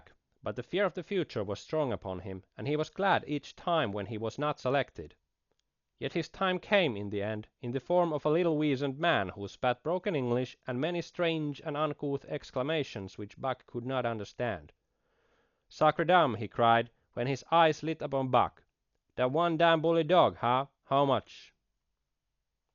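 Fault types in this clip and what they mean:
Dolby Digital compression: The speech throughout sounds dull and heavily coded, with nothing above 6.9 kHz and a rough, fluttering noise clinging to voiced sounds. The likely cause is an AC-3-style encoder at a very low bitrate, consistent with about 48 kbps, which drops many frequency lines and refills them with dither noise. That noise fill sets it apart from a plain low-pass filter, which would leave the remaining band clean, and from MP3's sharper swirling.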